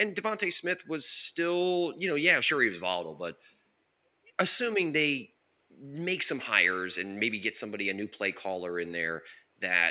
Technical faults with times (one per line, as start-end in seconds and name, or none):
none